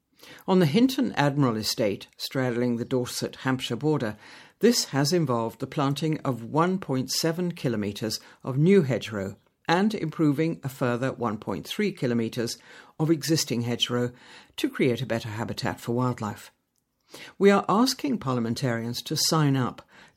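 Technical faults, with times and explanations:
No technical faults are audible in this speech.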